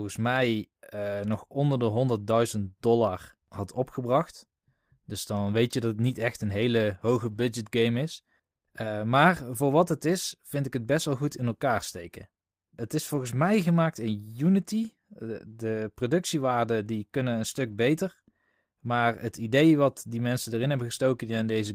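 At 7.23 s after "niet echt een hele", 13.07 s before "mij gemaakt in", and 17.67 s after "productiewaarden die kunnen een", a lost packet rebuilt from error correction leaves 100, 120 and 60 ms of rougher, noisier speech with no gap, visible on a spectrogram as smeared, grainier patches.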